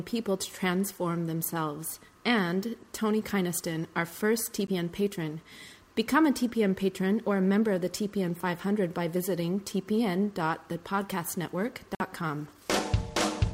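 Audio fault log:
4.67–4.70 s and 11.95–12.02 s, Bluetooth stall: the audio drops to brief silence twice, about 12 ms at the first point and 51 ms at the second, then resumes. The cause is likely a wireless stall, where radio interference delayed packets so the receiving buffer emptied and output paused until the retransmitted data arrived.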